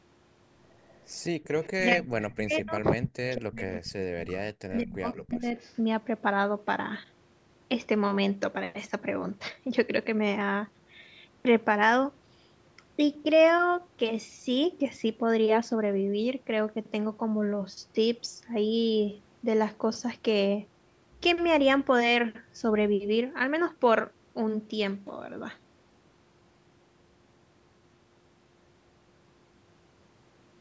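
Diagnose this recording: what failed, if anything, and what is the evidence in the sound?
A faint copy of the speech trails the original by 186 ms, first from 0.89 to 1.72 s, then at 2.22 to 2.72 s (the loudest, about 15 dB under the direct speech), 3.75 to 3.79 s, 4.71 to 4.77 s and 5.13 to 5.8 s, elsewhere around 20 dB down. This is echo leak in the call processing stage: the far end's loudspeaker output reached its microphone and was likely not fully cancelled before being sent back.

From 1.76 to 5.55 s the talker's level repeatedly collapses, dropping by as much as roughly 40 dB, with about three seconds of speech affected in total. The dropouts fall in the same span as the echo bursts, meaning both sides were active together. This is speech suppressed in double talk, again in call processing: the echo canceller likely could not separate the near talker from the returning echo, so it attenuated both.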